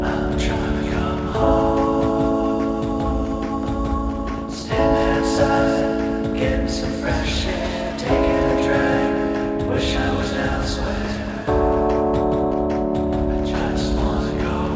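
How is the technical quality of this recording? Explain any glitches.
The recording has one glitch, a single skip at 2.60 s. The audio passed through a call path using the G.722 codec, which fits a 64 kbps setting. Nothing is heard above 8 kHz.

At 2.60 s, a short piece of audio is missing between chunks. Roughly a twentieth of a second of sound disappears. The audio on either side is spliced together with no gap of silence, so the sound jumps forward abruptly. The likely cause is a recorder or processor handling audio in blocks. It seems to drop about 50 milliseconds while closing one block and opening the next. The timing fits 5-second chunks, with this skip falling at one of the boundaries.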